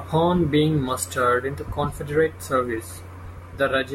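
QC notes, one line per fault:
No technical faults heard.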